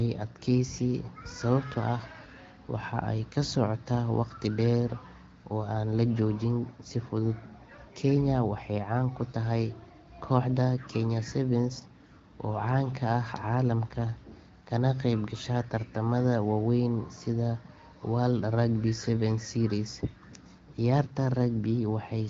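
No faults are present in this speech, which carries the band-limited character of the AMR wideband (HD Voice) codec, with nothing above 7.6 kHz and light coding colouration that fits one of its higher rates, around 15.85 kbit/s.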